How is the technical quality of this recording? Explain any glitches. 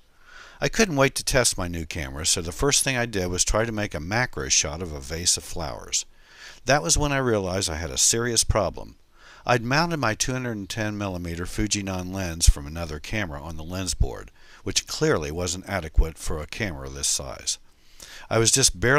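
No glitches or technical faults can be heard here.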